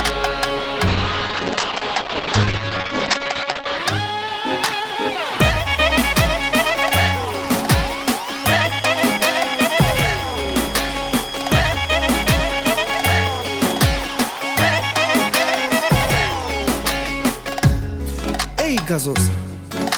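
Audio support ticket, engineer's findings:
Call bitrate drop, 0.88–3.85 s: coarse, muffled audio. Spectrogram shows a hard ceiling at 8 kHz. Fits a bandwidth-estimate fall starving the encoder from about 32 to 9 kbps.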